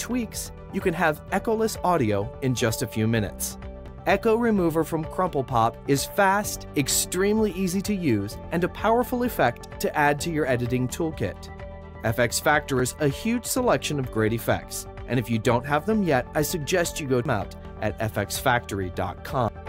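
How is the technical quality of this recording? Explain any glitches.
Four brief glitches come from damaged data in a compressed stream, at 3.88, 12.80, 17.25 and 19.48 s. Corrupted bytes leave the decoder unable to read those frames, so it loses sync and hunts for the next header. Each spot sounds like a short chirp or blip.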